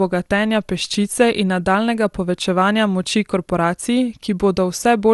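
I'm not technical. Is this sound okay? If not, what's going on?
No, not quite. This speech has a fault called generation loss running the whole way through. It sounds as if it was likely squeezed into a compressed format, the MP2 kind, and then unpacked and re-squeezed about four times over. Each round chips away a bit more, so the voice comes across swirly, hollow and smeared, with the starts of sounds blurred, and nothing comes through above roughly 12 kHz.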